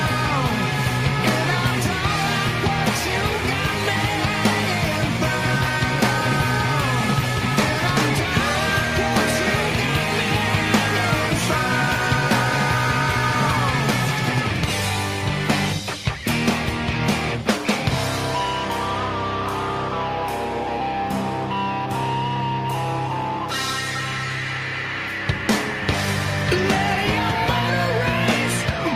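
No technical faults can be heard in this audio. Nothing in the recording or its playback path stands out as broken.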